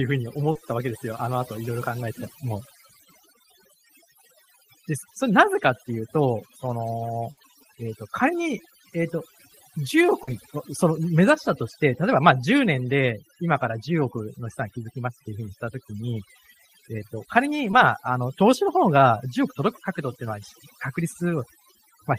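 The whole clip has overdone noise removal on it. The noise reducer was pushed too hard, so individual frequency bands get dropped to nothing whenever they sit close to its idea of the noise floor, and the softer parts of the speech get dragged down with them. You hear a background that drops away and breaks up into little twinkling specks.

The first dropout comes right at the start, 0.51 to 0.57 s. That's a short concealed packet loss: about 40 ms of audio didn't arrive in time, and the decoder papered over it by extending the sound just before and crossfading back into the real stream. It comes across as a quick smear or wobble rather than an outright gap.

At 7.31 to 7.39 s there's a burst of packet loss, a run of about 60 ms that never made it to playback. The receiver kept the last sound going and let it fade, so you get a brief held buzz or dying hiss, and then the audio picks up further along with that stretch simply gone.

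Two more short concealed packet losses follow, at 10.23 to 10.29 s covering about 40 ms, and at 17.71 to 17.75 s covering about 20 ms. Same patching trick both times, heard as a little smear or wobble.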